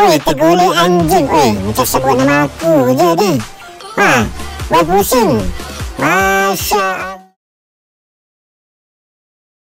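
No technical faults; the ending is a smooth fade-out.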